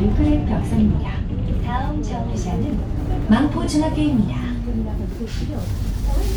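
No technical faults can be heard anywhere in the audio.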